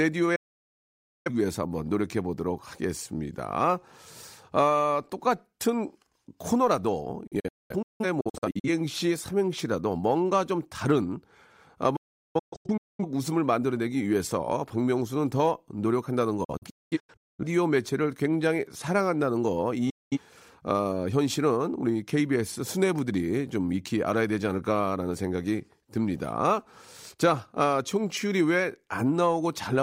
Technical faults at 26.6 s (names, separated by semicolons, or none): none